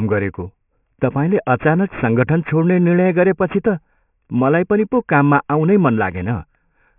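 Aliasing runs through the whole speech clip. The audio was resampled down without a proper low-pass filter first. Everything above 3 kHz folds back into wrong pitches, which fits a 6 kHz rate. Sibilants sound gritty and metallic, with the folded energy roughly 25 dB below the speech.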